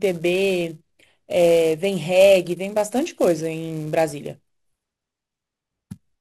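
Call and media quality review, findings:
Filter restarted on every block, throughout: steady buzz near 375 Hz riding the speech, louder on louder passages. Filter state lost between blocks, each starting from silence with a small transient; rate fits a 128-sample block. Check block-processing filter state handling.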